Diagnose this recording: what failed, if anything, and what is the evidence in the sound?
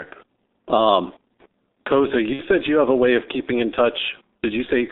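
Codec stage: the whole speech clip is heavily damaged by the G.723.1 codec, muffled and hoarse within 250 Hz to 3.7 kHz at 6.3 kbit/s. The smeared consonants separate it from simple band-limiting.

Network stage: VoIP packet loss concealed by the speech codec at 2.33–2.42 s, just before "said you have a", a 60 ms gap consistent with two lost 30 ms frames. It is a fading extrapolation of the voice rather than silence, which separates it from a plain dropout.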